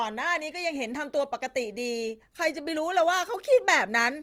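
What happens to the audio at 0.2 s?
At 0.2 s, as across the whole clip, the speech sounds grainy and rough, likely from Opus compression in its music mode at a low bitrate, around 24 kbps. Starved bands are filled with folded or noise-like energy, so a spectrogram shows smeared, speckled texture reaching about 20.2 kHz rather than clean harmonics or empty holes.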